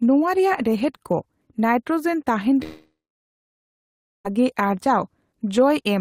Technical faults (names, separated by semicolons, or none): long network dropout